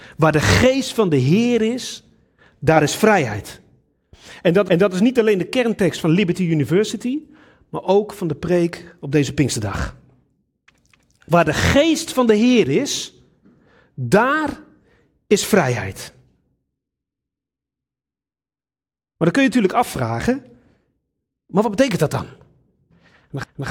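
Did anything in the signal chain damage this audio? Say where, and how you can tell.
Yes, overlapping chunks at the buffer stage: about 250 ms replays at 4.68, 10.93 and 23.43 s, fitting 6 s chunks. The repeated material, rather than missing sound, rules out dropouts.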